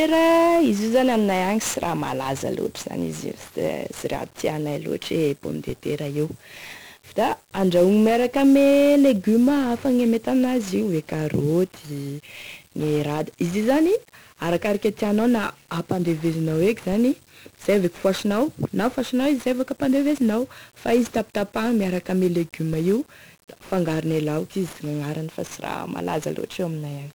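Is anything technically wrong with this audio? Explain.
Yes. Two faults are present.

The first is 1-bit DFPWM compression, heard across the entire speech clip. Each sample is reduced to a single bit that nudges an adaptive level up or down, so the waveform is only approximated by a tracking staircase. The damage here is heavy: a dense, broadband quantisation noise sits under everything, giving a fuzzy, crackly texture, and the upper frequencies are swamped by hiss. The grain of the noise fits a data rate of around 48 kbps, one bit per sample.

The second is a DC step, occurring three times, at 4.14 s, 5.69 s and 16.93 s. At each point the waveform's zero line jumps abruptly to a new offset, as if a converter had recalibrated or an input carrying a DC bias had been switched in. The offset does not hold. It bleeds away through a roughly 20 Hz high-pass response, so each event is heard as a brief low thump or click while the speech continues unaffected.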